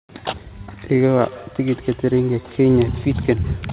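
From 0.87 s to the end, each word returns in thin, ringing repeats about 150 ms apart, peaking about 20 dB below the speech. This is feedback echo between two devices.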